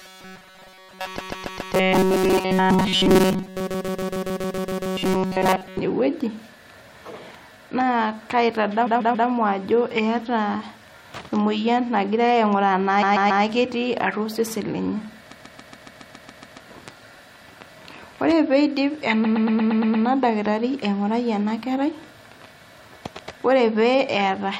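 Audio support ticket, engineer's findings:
Rigid metallic buzz at 188 Hz, 0.01–5.79 s, most of the audio replaced. Likely robotic sound from repeated short buffers: underrun playback looping about 5.3 ms of audio.

Stutter replaying a 139 ms block 3 to 9 times (116 ms at 19.24 s) at 1.17, 3.66, 8.86, 13.02, 15.31, 19.24 s. Repeated frames from a duplicating encoder or transport, adding 0.42–1.25 s each.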